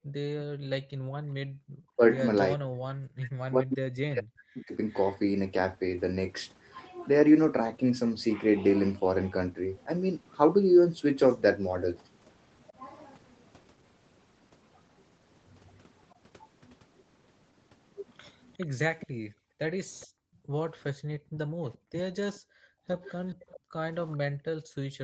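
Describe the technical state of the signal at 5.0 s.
At 5.0 s an echo canceller on the loudspeaker side has likely failed to remove all of its microphone pickup, causing an echo leak from 4.54 to 5.13 s: a faint delayed copy of the speech, roughly 20 dB below it, trails the original by 431 ms.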